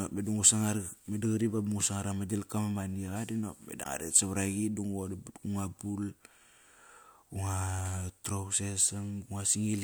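A speech clip with one fault: damaged data in a compressed stream. Right after "ma maniqa di nop", from 3.81 to 3.86 s, a brief glitch of about 50 ms breaks the flow. It sounds like a chirp, squawk, click or short hole rather than clean audio. Part of the encoded data there was corrupted. The decoder read those frames wrongly and lost sync. It then had to hunt for the next valid frame header before playback recovered.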